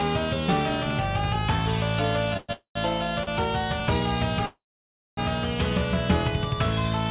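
Three call audio freezes land in this one, and they most likely come from packets getting held up so the jitter buffer ran dry. At 2.37 to 2.50 s the last sound just smears on for about 114 ms as a fading buzz or hiss. Almost straight after, at 2.52 to 2.77 s, it does that again for about 229 ms, with roughly 100 ms of that sagging into silence. The big one is 4.46 to 5.19 s: about 716 ms of fill, most of it (around 580 ms) gone quiet. Each time the audio picks up where it left off, so nothing's lost, just pushed later. There's also a short stall from a late packet at 3.23 to 3.29 s, where one sound is held about 37 ms too long with a slight buzz or dip while the receiver waits, then carries on from the same spot. Underneath it all the call path itself sounds dull, with nothing above 4 kHz, which fits G.711 A-law at 64 kbps.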